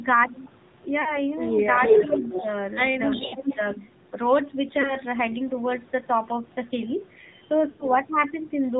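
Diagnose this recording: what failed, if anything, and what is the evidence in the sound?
This is speech that's been through the AMR narrowband mobile codec, and the damage is plainly audible the whole way through. Nothing gets above 4 kHz, and the voice has that buzzy, synthetic edge you get when a vocal-tract model is fed with very few pulses. That thinness fits one of the low modes, around 7.4 kbps. It's a codec-stage fault, baked in at encode.

There are also lost AMR speech frames, a network-stage problem. Radio errors killed frames, and the decoder bridged the gaps by replaying its last pitch and filter settings at falling gain. The first is at 1.02 to 1.21 s, about 40 ms of missing audio, heard as a short warbly dip. Next is 3.26 to 3.34 s, around 60 ms, then 4.82 to 4.97 s, a single brief hiccup. The worst is 7.70 to 7.88 s. About 100 ms is gone there, so the sound smears, fades out and comes back rough.

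Two stretches have an echo leak, which is a call-processing fault. From 1.77 to 2.48 s a delayed copy trails the talker by about 350 ms and is actually louder, about 5 dB above the speech. Between 3.10 and 3.75 s the copy returns at a similar delay but sits about 5 dB down. The likely cause is a far end on speakerphone whose echo canceller didn't fully cancel its mic pickup and sent it back.

Overlapping that first echo, the talker's level sags from 2.05 to 2.36 s. That's speech suppressed in double talk: roughly 200 ms is affected in total, with the deepest drop around 10 dB. This is also call processing, and the likely mechanism is an echo canceller that heard both sides at once, couldn't tell its own talker from the loudspeaker echo, and ducked everything.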